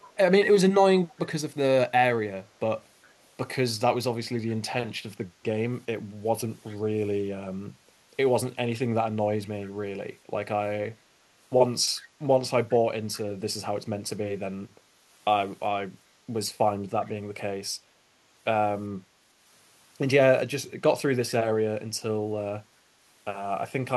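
An echo canceller on the far end, likely with the call on a loudspeaker, lets short scraps of returned speech slip through. This echo leak comes back about 407 ms behind the original and is heard at 0.00–0.15 s, 1.08–1.15 s, 3.08–3.14 s, 6.70–6.76 s, 11.95–12.01 s and 13.13–13.20 s. Each is a brief, faint ghost of earlier speech. The loudest, at 0.00 s and 13.13 s, sit about 25 dB under the speech, and the one at 3.08 s is barely audible.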